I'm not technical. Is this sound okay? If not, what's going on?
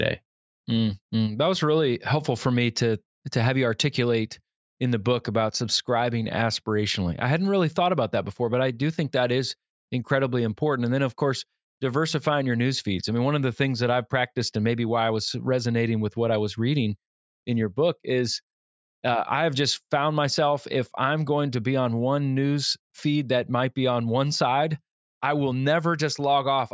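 Yes, nothing in this recording points to a technical problem with how the sound was captured, processed or delivered.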